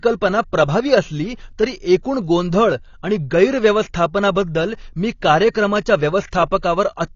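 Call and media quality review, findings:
Throughout: dull, band-limited speech, nothing above 7 kHz, with plainly audible warbling smear on sibilants and sustained vowels. AAC compression, likely an AAC-LC encoder starved of bits; the damage fits roughly 24 kbps. Too few bits for 1,024 lines a frame, so the encoder drops the top band and quantises the rest coarsely, leaving spectral holes.

5.51–5.54 s (39 ms) and 6.61–6.63 s (20 ms): brief hiss ahead of onsets, attacks softened and smeared. Pre-echo from the same transform codec. Quantisation noise budgeted for the loud attack spreads across the whole block, including the quiet stretch before it. Longer smear at 5.51 s, shorter at 6.61 s.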